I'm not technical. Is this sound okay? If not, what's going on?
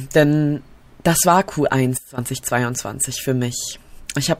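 No. At about 1.98 seconds there is a sudden gain jump. Something in the recording chain likely changed its volume setting instantly instead of easing into it. The speech and the background noise drop together to a much quieter level at that moment, stay sharply turned down for about a fifth of a second, then snap back up at 2.18 seconds. The result is a brief, abrupt dip in loudness.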